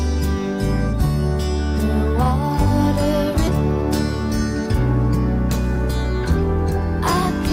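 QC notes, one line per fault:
3.47–3.49 s, skip ahead: the sound lurches forward with no gap at all, as if about a second of material had vanished and the two sides were spliced straight together. Playback dropped roughly a second of audio that had already queued up, likely because the jitter buffer overflowed and discarded it, so timing jumped ahead to catch up. Nothing fills the hole, which makes the cut abrupt rather than silent.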